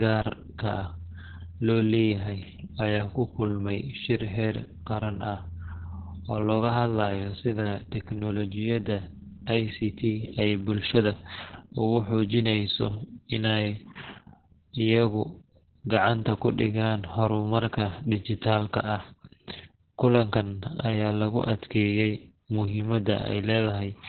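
From start to finish the speech carries Opus voice compression working in its SILK linear-prediction mode at narrowband. Nothing survives above about 4.4 kHz, so consonants sound dull and boxed-in, and the voice has a hoarse, faintly robotic grain from coarsely coded excitation, with heavy damage that fits a bitrate near 6 kbps and long 60 ms frames. Unlike a plain low-pass filter, which only muffles, this adds that rough, buzzy texture.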